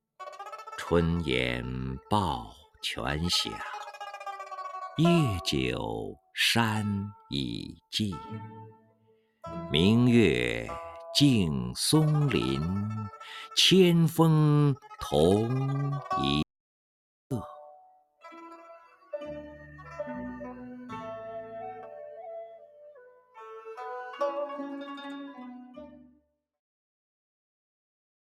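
A noise suppressor applied to music or sounds runs throughout, treating sustained material as noise, so the level pumps and swings by a few decibels. Sound cut by the noise suppressor appears at 2.63–2.83 s (about 14 dB), 8.75–9.43 s (about 18 dB), 17.79–18.25 s (about 18 dB), 18.57–19.13 s (about 12 dB), 22.48–23.37 s (about 14 dB) and 26.09–26.27 s (about 17 dB), where held sound sinks sharply. An audio dropout to silence runs from 16.42 to 17.31 s, about 0.89 s of silence with no room tone, likely from a lost input while recording continued.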